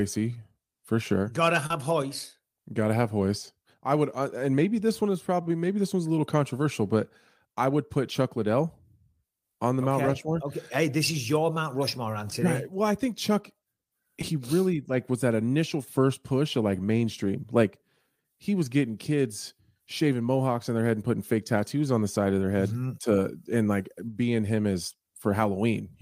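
At 1.66 to 1.71 s and again at 14.22 s, short concealed packet loss briefly smears the speech: about 30 ms of audio, then about 10 ms, never arrived in time, and the decoder bridged each hole by extending the preceding sound before blending back into real audio. Unlike a hard dropout, there is no silence or click of a clean cut, only a brief synthetic wobble where the sound carries on rather than stopping.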